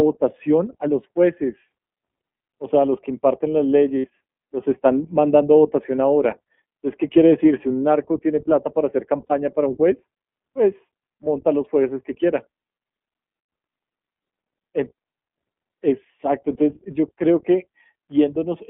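You're hearing a speech recording that's been through the iLBC codec. The line band runs from about 200 Hz to 3.5 kHz, so there's no air or sibilance on top. The coding damage is plainly audible, giving the voice that slightly rough, synthetic edge you get when each short frame's excitation is coded independently. That behaviour and the texture fit the 20 ms, 15.2 kbps mode. There are also two spots of lost iLBC frames, at 3.98 to 4.06 s (about 60 ms, roughly three frames) and 9.27 to 9.32 s (about 40 ms, two frames). At each one the decoder covers the hole by repeating the last pitch cycle with some noise mixed in, so you hear a brief held, faintly buzzy vowel instead of a dropout. Since iLBC frames don't depend on their neighbours, the voice snaps straight back once real packets arrive again.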